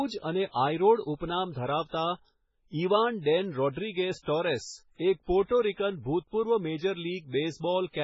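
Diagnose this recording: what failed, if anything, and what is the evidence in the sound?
Heavy MP3 compression, likely at the codec stage: the speech has nothing above 7.6 kHz throughout, with watery, swirly smearing that fits a bitrate near 16 kbps.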